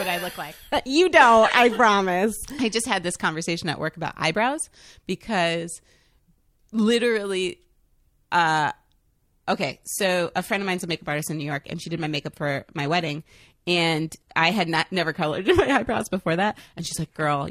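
At 9.50 s the speech switches abruptly to an adaptive stream at a lower bitrate and stays there to the end at 17.50 s. Codec artefacts rise, which fits a step down from about 96 kbit/s AAC to a 24 kbit/s HE-AAC version whose upper frequencies are rebuilt rather than coded. Unlike a dropout or rebuffering stall, there is no gap or pause, only a sudden, sustained loss of quality.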